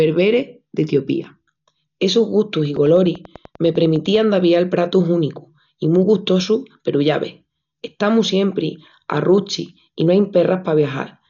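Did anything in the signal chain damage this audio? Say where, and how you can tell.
Yes, in two places. At the codec stage the speech was likely squeezed through Dolby Digital compression at a very low rate, with heavy damage that fits a bitrate around 48 kbps. The encoder narrowed the band so that nothing survives above 6.9 kHz, and it left many frequency lines without mantissa bits, so the decoder filled them with dither noise. You hear this throughout as dull, muffled speech with a rough, fluttering haze around voiced tones.

Separately, a train of clicks runs from 2.76 to 4.17 s, ending just before "d'avial pratus únicus i". The likely source is electrical interference in the analogue wiring or a faulty connection or power supply injecting a repeated pulse. About fifteen clicks of much the same shape arrive at a regular 10.1 per second. They peak at about the level of the speech itself, so they come across as a steady ticking laid over the sound.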